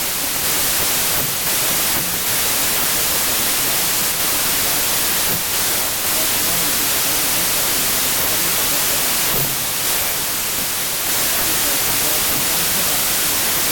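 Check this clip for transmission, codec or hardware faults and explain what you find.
There's one fault, and it runs the whole way through: a wrong sample width. The speech was written as packed 24-bit integers but read back as 32-bit, so each four-byte read straddles the boundaries between three-byte samples. Most values come out scrambled, leaving loud noise with the speech buried underneath, playing 1.33 times fast and pitched up to match.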